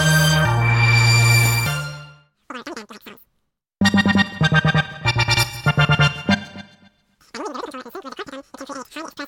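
Wrong sample rate, throughout the clip: the audio runs three times too fast, with everything shifted up by 19 semitones, just over an octave and a half. Speed and pitch rise together because the samples are replayed faster than they were captured, with no rate conversion between the two. A threefold ratio fits material made at 16 kHz and played back at 48 kHz. The sound comes across as a rushed, squeaky version of itself.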